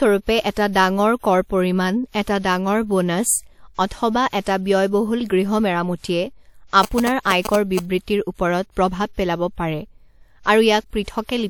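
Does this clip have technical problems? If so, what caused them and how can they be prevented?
Yes. From 6.83 to 7.79 s there are GSM signalling bursts, heard as a galloping dit-dit-dit of short 217 Hz buzzes at about 5 dB below the speech. A nearby 2G phone's radio bursts were rectified by the audio circuit. On a spectrogram they show as short vertical stacks of 217 Hz harmonics, and on the waveform as clustered trains of rectangular pulses. To prevent this, keep phones away from microphones, cables and interfaces, or switch them to flight mode while recording.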